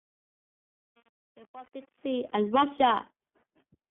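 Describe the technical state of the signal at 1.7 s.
Lost iLBC frames, 1.66 to 1.68 s: one packet, about 20 ms of audio, went missing just before this moment, and the decoder filled the gap by repeating the last pitch cycle blended with noise. It comes across as a brief held, slightly buzzy vowel. Because each frame decodes independently, the sound is back in shape by 1.7 s.

Truncation distortion on a fade, 0.0 to 2.4 s: the fade that runs until 2.4 s was computed with only about 7 bits and no dither. At this still-low level the waveform is reduced to coarse square steps, so the sound is gritty, with the worst damage running up to 2.3 s.

iLBC codec, throughout: the signal is confined to roughly 150 Hz to 3.4 kHz, with nothing above 4 kHz. The plainly audible coding damage gives the sound a rough, synthetic edge, and the rate points to the 15.2 kbps mode with 20 ms frames.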